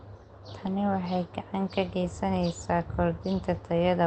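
No faults found in the speech; the call path shows ordinary Opus coding with the top end cut off at 8 kHz, consistent with a low bitrate around 20 kbps.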